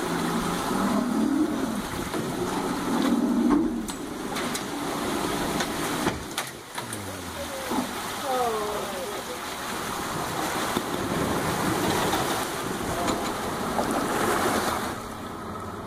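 From 9.59 s to 14.59 s, every sound is followed by a second full-band copy roughly a fifth of a second later, about 5 dB quieter. It produces a clean, dry slapback with no decay or room colour, and it starts and stops abruptly. This is a doubled audio track. The likely cause is the same signal reaching the mix twice, once directly and once through a slower capture path or a misaligned edit that holds a delayed copy.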